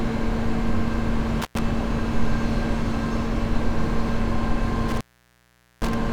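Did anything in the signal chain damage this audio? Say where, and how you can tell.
Yes. The damage is in the analogue wiring, an intermittent contact where a loose cable or plug briefly opens. The audio drops out twice with crackle at each edge: from 1.42 to 1.59 s, with the line open for about 101 ms, and again from 4.89 to 5.94 s, open for about 813 ms. While the connection is broken, faint hiss remains. The crackle comes from the contact chattering as it opens and recloses.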